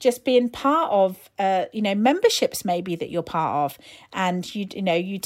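No technical faults can be heard anywhere in the speech. There is no moment where the audio path misbehaves, so there is nothing to place in time.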